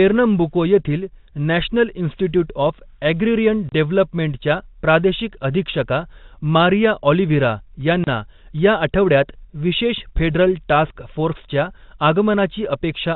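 A single packet of about 30 ms went missing twice and the receiver played silence in its place: packet loss filled with silence. At 3.69 s, between "ऑफ ॲग्रिरियन" and "डेव्हलपमेंटच्या प्रादेशिक", and again at 8.04 s, the speech drops into a brief hard-edged hole.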